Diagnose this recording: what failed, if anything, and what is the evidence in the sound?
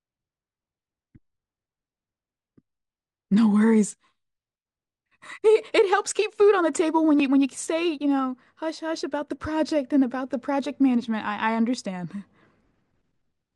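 The failure is imaging from linear upsampling, in the sample-rate conversion stage. It runs through the whole speech clip. The top of the band sounds dulled, and a light metallic shimmer rides on the sibilants. That shimmer is a mirrored copy of the spectrum, lying roughly between 11 kHz and 22 kHz, some 30 dB below the speech. The rate was raised by joining samples with straight lines, which fits a rise from about 22 kHz to 48 kHz. That crude interpolation dulls the highs and leaves the images behind.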